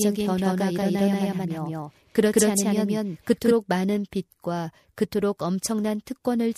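From the start to 3.54 s the speech carries a doubled audio track: an equally loud, dry copy trails by about a fifth of a second, likely a second capture path, then cuts off abruptly.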